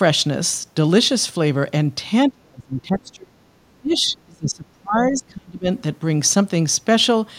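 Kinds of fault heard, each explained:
Speech suppressed in double talk: the speech sinks deeply, almost vanishing, at 2.3–3.36 s and 3.81–5.67 s, likely an echo canceller ducking the speech along with the echo while both sides talked.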